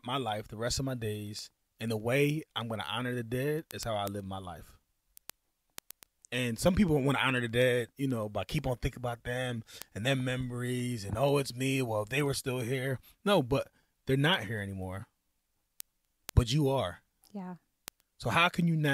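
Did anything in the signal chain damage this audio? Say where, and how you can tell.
Yes: word clock ticks at the digital link, sharp clicks roughly every tenth of a second from 0.17 to 18.86 s, as unlocked clocks drift about 150 ppm apart.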